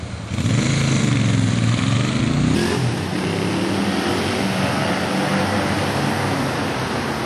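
A recording of everyday sounds with a section at the wrong speed: from 2.55 s to the end, playback runs 1.32 times faster than the material before it. Pitch and tempo jump together at that point, so everything rises by about five semitones and events pass noticeably quicker, giving the latter part a hurried, brighter character. The likely cause is that this section was played or edited against the wrong clock rate rather than resampled correctly.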